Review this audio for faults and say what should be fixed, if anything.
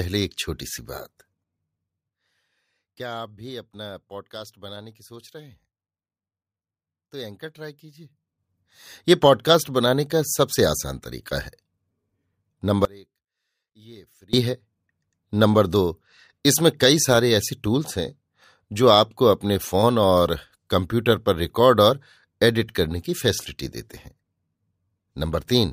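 From 12.85 to 14.33 s the speech cuts out abruptly, leaving only a faint trace about 30 dB down: an audio dropout to a faint residue, likely a momentary signal-path interruption. To prevent it, secure the cable and connector chain and monitor the input.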